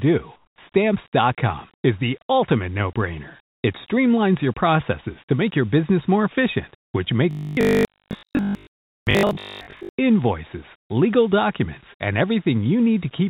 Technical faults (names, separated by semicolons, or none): comfort noise in place of the background; onset clipped by the voice detector; robotic sound from repeated short buffers